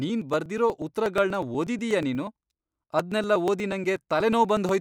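Speech with periodic USB or driver dropouts. From 0.09 to 4.69 s, a few milliseconds are skipped every 0.121 s. This gives about forty evenly spaced ticks while the speech plays.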